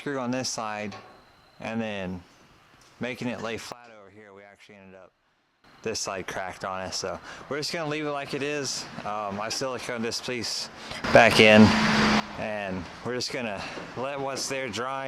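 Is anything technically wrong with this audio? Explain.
Yes. From 3.72 to 5.64 s the sound and its background drop abruptly by about 17 dB, and from 11.04 to 12.2 s they leap about 17 dB louder. These are sudden gain jumps, likely from gain changes applied instantly without a ramp.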